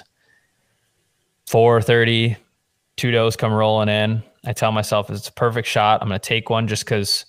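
No audible technical faults anywhere in the speech recording, so there is nothing to flag.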